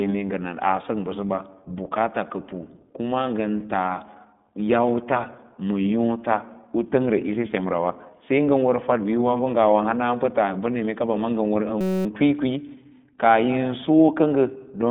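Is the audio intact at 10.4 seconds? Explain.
No. The iLBC codec runs through the whole clip, including 10.4 s. It codes each 20 ms frame independently and passes only 150 Hz to 3.6 kHz, leaving speech muffled, rough and synthetic, the damage plainly audible.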